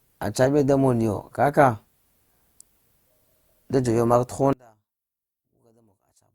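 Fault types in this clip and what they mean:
One channel inverted: one stereo channel has likely had its polarity flipped, so when the two channels are summed to mono the shared centre content cancels. From 4.53 s to 6.35 s the speech drops by about 36 dB, leaving only a faint residue.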